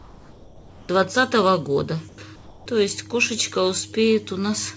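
Comfort noise in place of the background appears at 0.00–0.89 s, 2.09–2.18 s and 2.36–2.66 s. The real background gives way to a smooth, featureless hiss, about 5, 3 and 5 dB quieter. The likely cause is discontinuous transmission, where the receiver synthesises noise whenever the sender goes silent.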